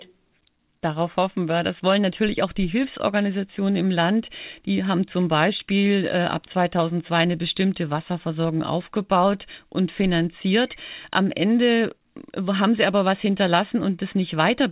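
Nothing here points to a technical problem in this speech recording, which simply carries the narrow, telephone-like band of a G.711 mu-law call at 64 kbps with nothing above 4 kHz.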